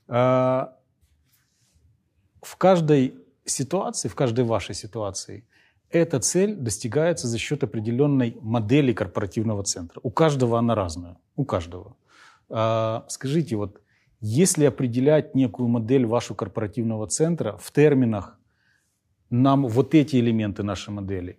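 No technical faults can be heard anywhere in the recording; the signal stays steady and intact throughout.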